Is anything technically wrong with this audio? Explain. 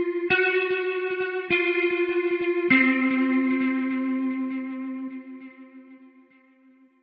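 Yes. From 2.09 to 2.45 s the audio burbles, with 12 frames hit. This is DAB burbling: bit errors slipping past error correction corrupt MP2 sub-band levels for up to a frame.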